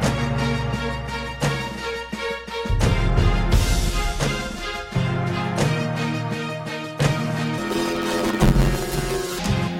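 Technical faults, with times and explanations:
7.58–9.39 s, planar audio read as interleaved: each 10.88 ms block replays left then right at double speed, giving a robotic buzz near 92 Hz.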